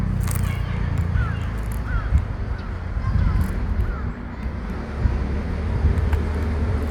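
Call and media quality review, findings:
No faults found: no dropouts, glitches, level problems or distortion heard anywhere in the clip.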